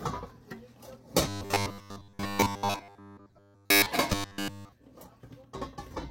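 From 1.28 to 3.86 s and from 4.12 to 4.72 s, a metallic 100 Hz buzz marks robotic sound from repeated short buffers. Audio likely arrives too seldom, so a 10 ms segment is looped over most of the first stretch and all of the second.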